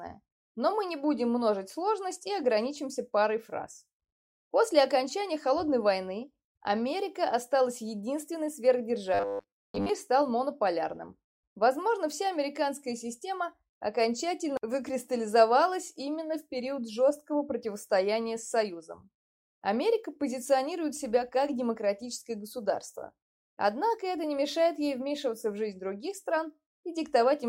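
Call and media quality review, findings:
Robotic sound from repeated short buffers, 9.14 to 9.89 s. Rigid metallic buzz at 100 Hz replaces the natural sound, loosely tracking its shape. Likely jitter buffer or playout underrun: audio arriving too seldom, the last 10 ms of buffered audio replayed to fill gaps, most of the real signal in that stretch skipped, the 10 ms repeat imposing the fixed 100 Hz pitch.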